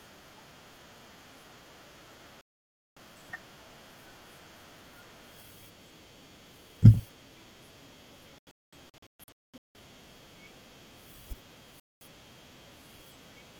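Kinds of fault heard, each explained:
Digital broadcast dropout: the speech cuts abruptly to silence and resumes further along, with the missing stretch simply gone. This happens at 2.41 to 2.98 s, as a broken patch of short holes from 8.38 to 9.79 s (about 0.94 s lost, the longest gap 0.21 s), and at 11.80 to 12.06 s. The receiver lost the signal or rejected corrupted frames, so it muted output until clean frames returned.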